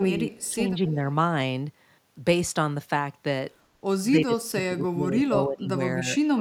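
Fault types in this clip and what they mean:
speech suppressed in double talk: Speech dips in patches, down about 25 dB toward the end, likely an echo canceller turning down both its own talker and the loudspeaker echo during overlapping talk.
echo leak: A very faint copy of the speech returns 254 ms late near the start, likely loudspeaker echo that the canceller did not fully remove.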